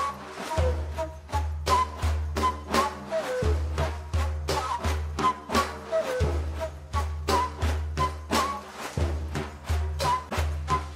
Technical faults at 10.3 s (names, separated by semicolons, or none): AAC frame loss with muting